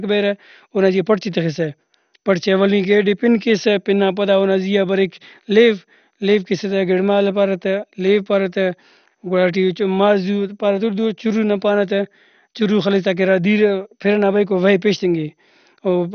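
From start to finish the speech sounds dull, with nothing above 6.5 kHz and a plainly audible gurgling, granular edge as upper bands flicker in and out. That points to likely MP2 compression, squeezed to a low bitrate around 48 kbps.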